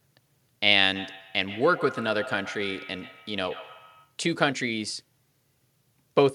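From 0.95 to 4.16 s the speech carries a feedback echo between two devices: a second device replays the signal into a nearby microphone, outside the echo canceller's reach. Repeats arrive roughly every 150 ms, thin and ringing, peaking at about 16 dB below the speech.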